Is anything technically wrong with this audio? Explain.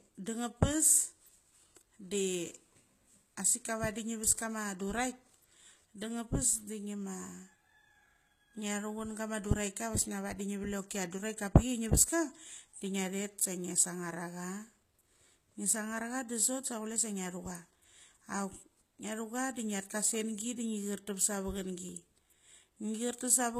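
Yes. Throughout the speech there is plainly audible codec damage, likely HE-AAC compression at a low bitrate, around 20 kbps. The encoder keeps only the lower spectrum and fills the treble by copying lower bands upward, so the top end sounds synthetic. Sibilants come out gritty and lispy, and nothing remains above 14.9 kHz. Unlike ordinary low-bitrate coding, which dulls the treble, this keeps it present but with harmonics that don't line up.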